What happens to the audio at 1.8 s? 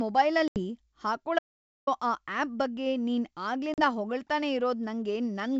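At 1.8 s the speech is inside an audio dropout to silence running from 1.39 to 1.87 s, roughly 0.48 s of silence with no room tone. The likely cause is a lost input signal while recording continued, so that stretch of speech is missing.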